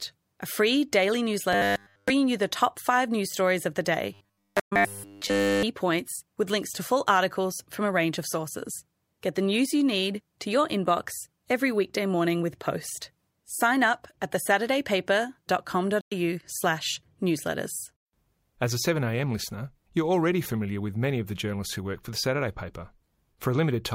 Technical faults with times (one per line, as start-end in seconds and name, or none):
1.53-2.10 robotic sound from repeated short buffers
4.14-5.63 robotic sound from repeated short buffers
4.59-4.73 AAC frame loss with muting
16.01-16.12 AAC frame loss with muting